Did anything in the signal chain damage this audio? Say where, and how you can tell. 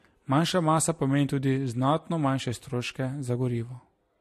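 Yes. Transcoding between lossy codecs runs throughout. Nothing above 13.1 kHz and layered codec smearing likely point to MP3 re-encoded into Vorbis, with each codec's artefacts stacking.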